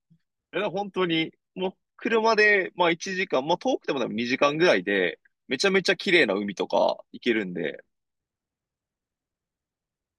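No technical faults can be heard anywhere in the recording; the signal stays continuous and stable throughout.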